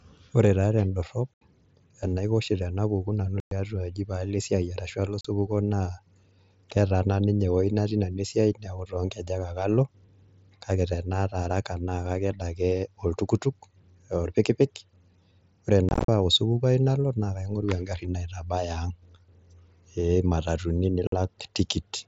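A speech recording carried over an mSBC wideband headset link has unconcealed Bluetooth headset packet loss. Abrupt silent holes appear at 1.36–1.42 s after "taa tendorrop", 3.40–3.52 s, 5.21–5.25 s, 15.89–16.09 s (scattered dropouts) and 21.07–21.13 s. Their hard edges, rather than repeated or smeared sound, show missing packets that were never filled in.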